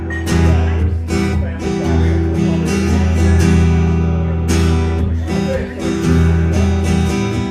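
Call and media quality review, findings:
No audible faults found on review. Nothing heard that points to any component needing a ticket.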